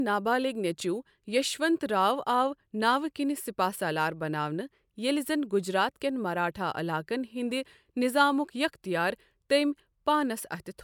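No technical faults can be heard anywhere in the recording.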